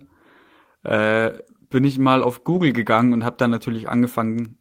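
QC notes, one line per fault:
No faults found in this clip.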